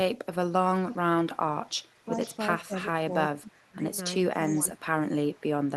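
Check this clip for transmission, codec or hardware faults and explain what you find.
Two faults recur in this speech clip: echo leak and speech suppressed in double talk.

Echo leak at 0.75–0.97, 1.35–2.38, 2.83–2.87, 4.47–4.6 and 5.27–5.7 s: a faint copy trailing by 401 ms, about 20 to 35 dB down, likely residual loudspeaker pickup the far-end echo canceller missed.

Speech suppressed in double talk at 2.66–2.71, 3.08–3.85 and 4.61–5.09 s: the voice dips roughly 10 to 20 dB, likely the canceller attenuating overlapping talk along with echo.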